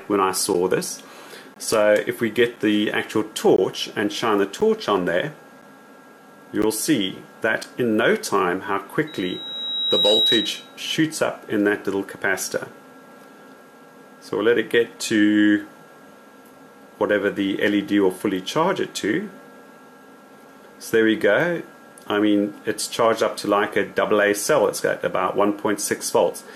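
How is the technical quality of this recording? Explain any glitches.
The recording has two faults: a run of brief silent holes in the first eight seconds, and a howl a little later.

Gaps between stream segments occur at 0.54, 1.54, 2.56, 3.56, 4.61, 5.62, 6.62 and 7.63 s, each 6 to 19 ms. Consecutive one-second segments don't quite meet, so the player fills the space with hard-edged silence. Unlike packet-loss dropouts, nothing is missing; the sound simply resumes, and the holes repeat about once per second.

Loudspeaker feedback squeal runs from 9.07 to 10.78 s. A microphone is picking up its own loudspeaker, and at 3.8 kHz the loop gain exceeds one, so that tone swells over roughly a second to about 5 dB above the sound. Unlike a steady interfering whistle, it grows by itself.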